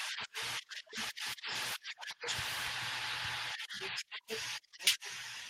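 At 2.67 s the receiver discarded about a second of speech, either lost on the way or dropped by the jitter buffer when it overflowed, while newer audio was already queued. This is a skip ahead. Playback jumps forward with no fill at all, so the two sides of the cut butt straight together. Roughly a second of speech is missing, and the listener hears an abrupt splice rather than a pause.

From 3.68 s to 5.00 s the jitter buffer was holding more audio than its target, so the receiver trimmed the excess by repeatedly cutting out short slices, each one or a few pitch periods long. This is a jitter buffer speed-up. About a tenth of a second is removed across this stretch, so the speech plays at 106% of its normal rate. The pitch stays where it was, but the delivery sounds slightly rushed.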